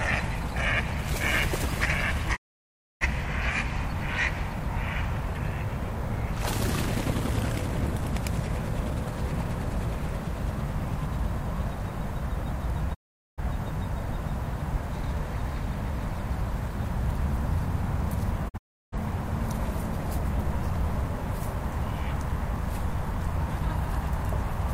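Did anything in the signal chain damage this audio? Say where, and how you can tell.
Yes. There is a digital broadcast dropout at the reception stage. The sound fades to silence within 20 ms at 2.35–3.06 s, 12.93–13.41 s and 18.48–18.97 s, and the last gap breaks into short holes. Nothing is smeared or repeated as network concealment would do. The receiver muted failed frames, so that audio is gone.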